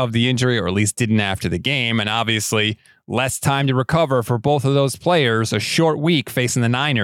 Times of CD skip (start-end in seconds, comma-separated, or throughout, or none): none